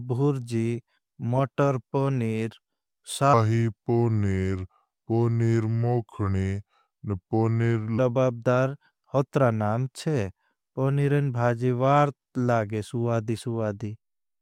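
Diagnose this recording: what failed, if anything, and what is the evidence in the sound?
Between 3.34 and 7.98 s the speech drops into a section at the wrong speed: it runs at 0.819x, so it drags and sits about three semitones lower, then snaps back. That's most likely a playback or editing stage resampling that stretch against the wrong clock.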